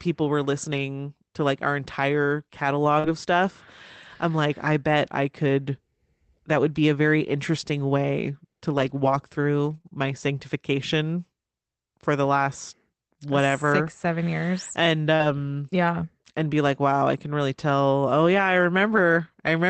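Speech carried over an Opus call path, with the audio band ending near 8 kHz, which fits a roughly 24 kbps setting. Short concealed packet loss appears at 2.99 to 3.06 s just after "to like our entire", at 9.78 to 9.86 s, and at 15.16 to 15.22 s. In each case 20 to 40 ms went missing and the decoder extended the preceding sound to cover it, leaving a brief smear or wobble. Lost packets rebuilt from error correction occur at 3.04 to 3.10 s, 8.78 to 9.12 s, 9.66 to 9.76 s, 9.86 s just before "my sanctification", 15.20 s and 18.92 to 18.98 s. Each gap was filled from the low-bitrate copy carried by the following packet, so nothing drops out, but those stretches sound rougher and noisier, including the 180 ms run near 9 s.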